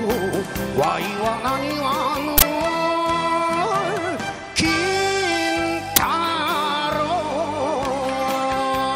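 At 2.38 s a harsh burst of loud digital noise cuts through the sound for about 43 ms. A shorter, similar blast follows at 5.96 s. Both are an uninitialised buffer: audio blocks were played before anything was written into them, so leftover memory came out as samples. The lengths fit a 2048-sample block for the first burst and a 512-sample block for the second.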